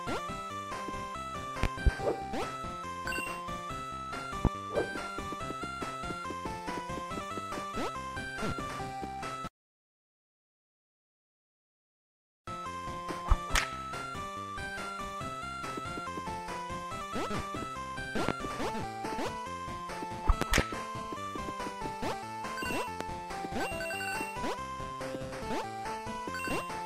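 Sharp loud pops punch far above the audio at 1.63 to 1.9 s (a double), 4.45, 18.29, 20.42 to 20.62 s (another double) and 23.01 s, likely from electrical voltage spikes.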